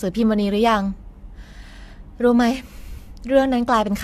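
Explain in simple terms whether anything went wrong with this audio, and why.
Something went wrong throughout the whole clip. The speech sounds swirly, smeared and hollow, and the starts of sounds are blurred. Nothing is heard above about 14 kHz. This is generation loss, likely from being compressed and re-saved several times.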